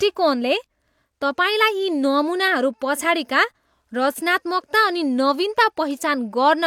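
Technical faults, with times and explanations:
No technical faults found in the speech audio.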